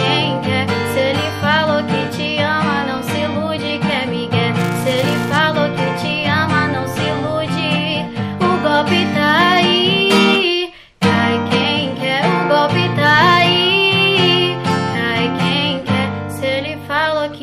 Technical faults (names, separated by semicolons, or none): filter restarted on every block